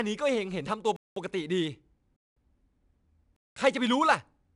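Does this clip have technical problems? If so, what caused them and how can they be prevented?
Yes. The 4-bit ADPCM compression puts a gritty hiss under the speech that rides its level, with roughness on sharp attacks and nothing above 10.6 kHz. Keeping a lossless or higher-quality format prevents it.

There's also a gap between chunks, a 200 ms hole at 0.96–1.16, 2.16–2.36 and 3.36–3.56 s, after each second of audio. A player that queues the next chunk before the current one ends would stop that.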